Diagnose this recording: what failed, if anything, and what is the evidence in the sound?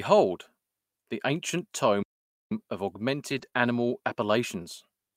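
Playback stall, at the playback buffer. The speech goes silent from 2.03 to 2.51 s, about half a second. The player likely ran dry or was blocked, then resumed.

Lost packet rebuilt from error correction, a network and codec issue. From 3.29 to 3.47 s and 3.54 to 3.56 s, speech turns rougher and noisier. Low-bitrate backup copies replaced the lost audio.

Short concealed packet loss, at the network and decoder. From 3.49 to 3.54 s, a brief smear appears. About 20 ms never arrived, and the decoder extended the preceding sound across the gap.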